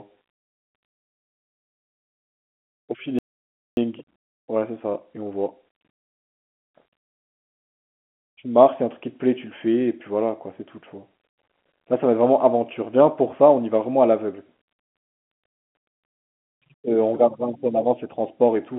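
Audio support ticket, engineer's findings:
Speech cuts to silence mid-flow at 3.19 s, resuming at 3.77 s, a gap of about 584 ms. Playback stall in the player; likely buffer underrun or blocked audio thread starving the output until data returned.

Speech hurried but at normal pitch from 3.77 to 6.77 s, running about 1.1x. Time-compressed catch-up in the player's jitter/playout logic, trimming small segments and cross-fading to drain the backlog left by the stall. Telephone-band G.711 mu-law path audible throughout.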